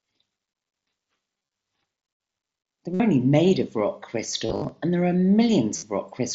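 Speech over a wideband Bluetooth headset link with concealed Bluetooth headset packet loss at 1.38–1.54 s, 2.94–3.00 s before "only made of rock", 4.46–4.72 s before "and there are", and 5.76–5.83 s. Lost audio is filled with buzzy repeats of the last 20 milliseconds or so at full level, not the silence of plain dropouts.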